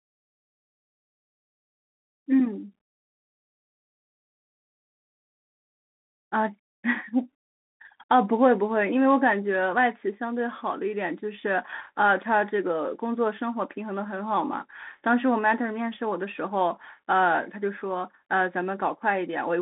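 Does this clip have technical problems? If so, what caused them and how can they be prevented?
Yes. Throughout, the speech has Bluetooth CVSD headset codec damage: a 200 Hz to 3.7 kHz band with nothing above 3.8 kHz, granular hiss, and scratchy sibilants, consistent with 64 kbps one-bit delta modulation. Prevent it by using a wideband headset profile or a wired microphone.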